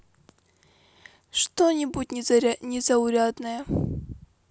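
Nothing in this bit of speech jumps out as a technical fault, so there's really nothing to flag here.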